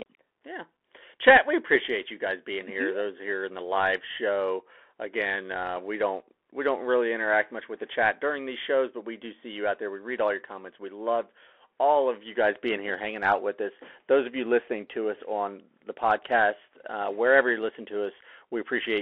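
Throughout, a Bluetooth CVSD codec confines the speech to 300 Hz to 3.4 kHz. Its one-bit slope tracking adds scratchy s sounds and granular hiss, unlike plain telephone filtering.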